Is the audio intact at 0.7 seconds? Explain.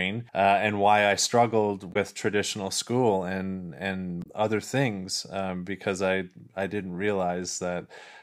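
Yes, at 0.7 seconds the speech plays through cleanly, with no dropout, click, distortion or other fault.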